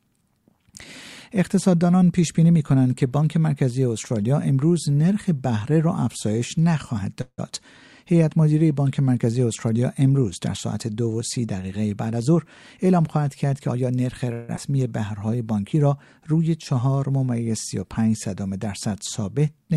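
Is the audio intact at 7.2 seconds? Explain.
No. From 7.21 to 7.40 s there is a call audio freeze: the last sound is stretched into a fading buzz that ends in roughly 40 ms of silence, about 166 ms in all, likely because delayed packets emptied the jitter buffer. Unlike a dropout, nothing is lost; the audio resumes where it stopped, about 0.17 s late.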